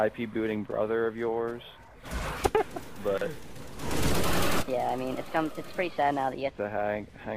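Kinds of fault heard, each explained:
Section at the wrong speed: from 4.10 to 6.50 s the sound runs 1.26 times too fast, so it hurries and rises by about four semitones at once, then drops back to normal. That pitch and tempo move together is what sets it apart from a pitch shift, which keeps the timing, or a time-stretch, which keeps the pitch. The likely cause is that stretch being played against the wrong clock rate.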